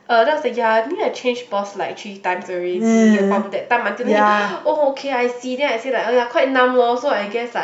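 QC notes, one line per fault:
No technical faults are audible; the signal keeps unbroken continuity across the whole recording.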